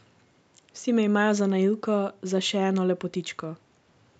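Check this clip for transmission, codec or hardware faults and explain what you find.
No transmission, codec or hardware faults turn up in this speech clip.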